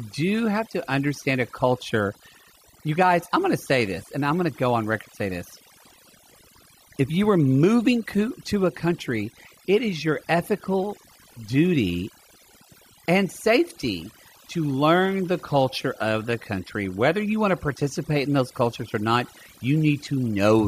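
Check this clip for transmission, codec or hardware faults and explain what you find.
One fault runs through the whole clip: overdone noise removal. A noise reduction stage was set far too strong. Frequency bands near its noise estimate get pushed down or cut entirely, and quieter parts of the speech vanish with them. The background drops and breaks up into twinkling, warbling specks.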